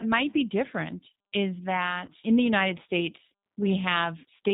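From start to finish, the speech carries plainly audible G.729 codec damage. The codec does not keep the waveform. It sends a vocal tract filter, a pitch predictor and a few pulses per 10 ms frame, and the decoder rebuilds speech from these. Nothing above 4 kHz survives, so the sound is muffled and band-limited. The voice stays intelligible but rough and slightly synthetic. This fits the 8 kbit/s G.729A variant.

At 2.06 to 2.10 s there is VoIP packet loss concealed by the speech codec. The gap lasts about 20 ms, which fits a single lost packet. With no data arriving, the decoder repeats its last pitch and filter settings at falling gain. The speech smears briefly into a buzzy tone or coloured noise that fades. Each frame depends on the one before, so the voice sounds weak and distorted for a short time after the packets return.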